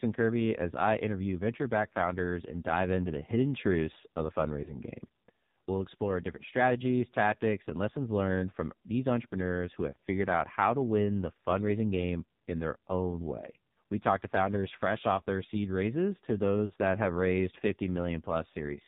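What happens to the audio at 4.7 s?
At 4.64 to 4.79 s the speech briefly dips and warbles, then returns rough for a moment. This is a lost AMR speech frame. One frame, which fits a single 20 ms loss, failed its check, and the decoder filled the gap by repeating the previous pitch and vocal-tract settings at lowered gain. Around this moment the speech also has a buzzy, synthetic, band-limited quality with nothing above 4 kHz. That comes from the AMR narrowband mobile codec running at 5.9 kbps, where too few bits leave the vocal-tract model audibly artificial.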